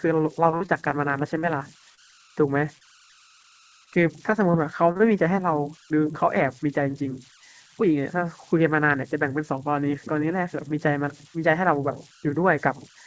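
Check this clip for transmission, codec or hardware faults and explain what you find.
Three faults are audible in this speech: converter idle tones throughout, repeated packet loss with a robotic quality early on, and a short jitter buffer speed-up. The wideband call path, which fits a codec such as G.722, leaves nothing above 8 kHz.

Converter idle tones run through the whole clip, at about 28 dB below the signal. A delta-sigma converter without dither settles into repeating bit patterns when the input is small, and those patterns produce a tone, here somewhere around 1.5 kHz. It is heard in pauses and as a grainy haze under quiet passages. A spectrogram shows a thin, steady horizontal line near 1.5 kHz that is clearest where the speech drops out.

Repeated packet loss (robotic sound) covers 0.44 to 5.01 s. There are 15 short holes, spread through that stretch, each up to 42 ms long. They total 200 ms, and the receiver spent 346 ms repeating the last sound to cover them, about 8% of the span. 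Because each patch extends the previous pitch cycle, the speech turns choppy, with pieces missing. On the waveform the patched sections look like copied, evenly repeating cycles. The spectrogram shows smeared, stair-stepped harmonics at each gap.

Jitter buffer speed-up runs from 6.80 to 7.84 s. The buffer had built up extra delay, so the receiver cut out short pieces of one or a few pitch periods, around 70 ms in all. That stretch plays at 105% speed with unchanged pitch, so it sounds slightly hurried. The spectrogram shows harmonics at the same frequencies but syllables slightly compressed in time, with small joins where cycles were removed.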